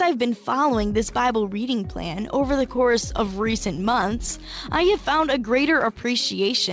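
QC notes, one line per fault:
2.52–4.28 s, repeated stalls (stutter): the jitter buffer ran empty 22 times, each gap up to 18 ms bridged by stretching the last sound, 214 ms in all, nothing lost, so it drags and judders. The waveform shows short repeated cycles, and the spectrogram shows smeared bands below the G.722 call path's 8 kHz ceiling.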